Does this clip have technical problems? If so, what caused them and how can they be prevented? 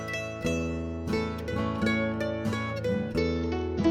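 Yes, there's a Bluetooth SBC bit pool drop from 3.18 s to the end: the treble dulls and gets gritty, consistent with the bit pool falling from 28 to about 9. Keep the phone close and reduce 2.4 GHz congestion.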